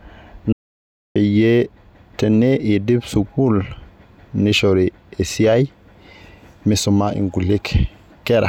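From 0.53 to 1.16 s, an audio dropout to silence removes about 0.63 s of speech: silence with no room tone, likely from a lost input signal.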